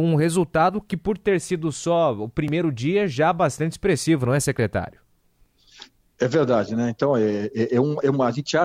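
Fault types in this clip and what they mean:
Audio missing between chunks: at 2.48 s and 5.46 s the sound jumps forward, losing a sliver of around 30 ms and butting the two sides together with no gap of silence. The skips sit about 3 s apart, so the likely cause is a recorder or processor working in 3-second blocks and dropping a bit of audio each time it closes one block and opens the next.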